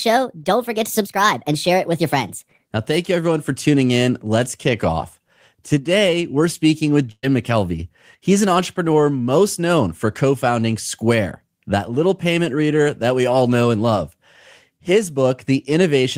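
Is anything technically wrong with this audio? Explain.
Yes, there are two faults in this speech clip.

Section at the wrong speed, 0.0 to 2.67 s: this opening stretch likely plays against a mismatched clock, running 1.29 times too fast. Pitch rises with tempo, about four semitones, so the voice sounds high, thin and hurried before settling to normal.

Burst of packet loss, 7.11 to 7.25 s, right after "we're speaking with": roughly 120 ms of audio never arrived. The receiver stretched the last sound for about 113 ms, fading it out, with about 40 ms of silence, then jumped ahead.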